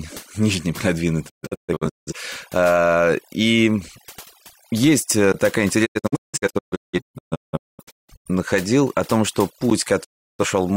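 From start to finish the background drops away into near-silent gaps flecked by twinkling specks. This is overdone noise removal: a noise reducer set far too strong shuts off any frequency band close to its noise estimate, taking quiet parts of the voice along with the hiss.

Between 1.28 and 2.14 s the sound drops out in several short holes, each fading down over about 20 ms. Together they remove roughly half a second of audio, and the longest hole lasts 0.17 s. This is a digital broadcast dropout. The receiver lost good frames and muted until valid ones arrived again, so whatever was transmitted during those holes is gone.

At 5.32 s there is a short hole, a block of digital silence about 17 ms long. The sound cut out abruptly and came back without any fade. The likely cause is an output buffer that was not filled in time.

From 5.85 to 8.30 s a second, longer digital broadcast dropout breaks up the sound with repeated muted holes spread over about 2.4 s. 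In total about 1.7 s is lost, and the longest single hole is about 0.21 s.

At 9.70 s, just after "о том что", there is a 12 ms block of digital silence, a length that fits a 512-sample buffer.

Finally, from 10.03 to 10.45 s, a third dropout, still following "о том что", fades the sound out and removes about a third of a second before it returns.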